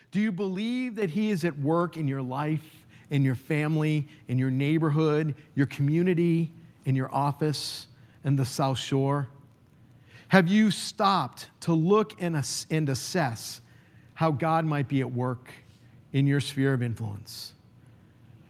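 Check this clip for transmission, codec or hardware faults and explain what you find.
One fault is present, a single microphone volume step-up at 1.02 s, just after "you believe". The input level of the whole signal rises by about 7 dB in one jump. The call software judged the microphone too quiet and raised the device's input volume at the hardware stage, so the speech and the room background rise together. That rules out a talker getting louder. The result is an abrupt lift in loudness and noise floor that stays at the new level.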